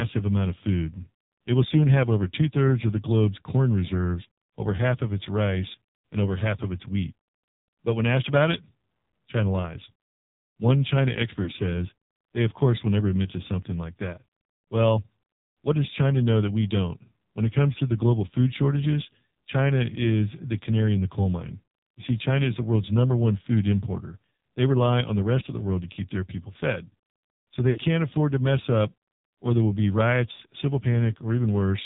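Throughout, the speech passes through the AMR narrowband mobile codec. Nothing above 4 kHz survives. The voice sounds heavily buzzy and synthetic, which fits a rate near 5.9 kbps.

Lost AMR speech frames follow at 11.44 to 11.50 s, 27.70 to 27.80 s and 30.34 to 30.40 s. The decoder reuses old settings at falling gain. The first gap gives a brief warbly dip of 20 ms, while the later runs of 60 and 40 ms sound drawn out and fading.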